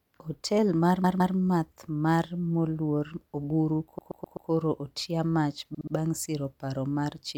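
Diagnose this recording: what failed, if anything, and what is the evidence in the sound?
The failure is repeated frames, at the codec or storage stage. The speech stutters three times: from 1.04 to 1.36 s a 160 ms block plays twice more, from 3.98 to 4.50 s a 128 ms block plays four more times, and from 5.74 to 5.94 s a 64 ms block plays three more times. A run of compressed frames was written or sent more than once, so the decoder replayed it, adding about 1.0 s in total.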